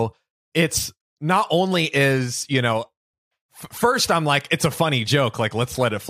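No faults found anywhere in the speech recording.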